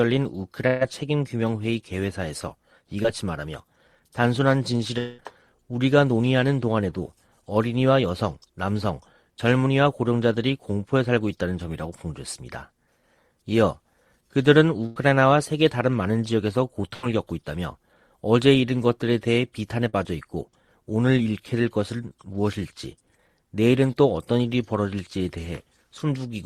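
Burst of packet loss at 0.67 to 0.83 s: about 140 ms of audio never arrived in time. The receiver stretched the last sound across the hole for roughly 130 ms, fading it into a held buzz or hiss before playback jumps ahead past the missing part.

Short concealed packet loss at 3.03 to 3.06 s: about 20 ms went missing and was patched by continuing the preceding sound, which leaves a brief smear or wobble before the real audio blends back in.

Long network dropout at 4.98 to 5.20 s: a fading continuation of the last sound fills about 200 ms without ever falling to silence, and then the audio resumes further on with that stretch gone. The likely cause is a gap in which nothing arrived from the network.

Further bursts of packet loss occur at 14.86 to 14.98 s and 16.94 to 17.05 s. Each loses about 100 ms, bridged by the same decaying buzz or hiss before the audio skips forward.

Short concealed packet loss recurs at 19.89 to 19.95 s, where about 40 ms is smoothed over and heard as a quick wobble.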